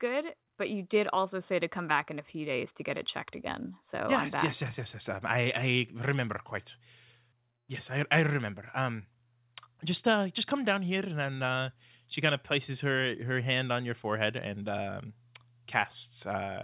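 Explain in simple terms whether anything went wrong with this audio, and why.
Nothing went wrong with this speech; it went over a normal phone-quality call link, whose codec keeps nothing above about 4 kHz and so sounds narrower than full-range audio.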